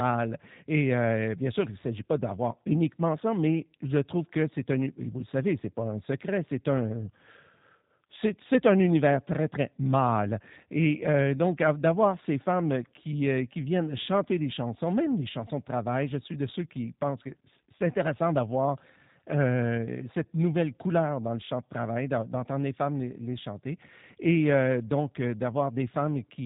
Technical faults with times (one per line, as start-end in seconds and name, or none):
0.00-26.45 G.729 codec